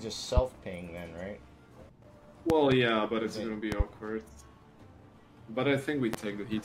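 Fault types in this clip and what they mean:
Loud pop: A sudden voltage spike lands on top of the sound, which carries on underneath. Double pops come at 2.5 s and 3.72 s, and a single one at 6.14 s, each peaking well above the audio. Static or a switch is the likely cause.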